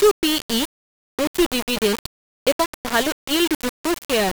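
From start to finish the speech sounds coarse and gritty, with grainy distortion about 10 dB below the signal that moves with it. Quiet moments sputter or vanish. The likely cause is low bit depth without dither: samples rounded to very few levels, consistent with 3 bits.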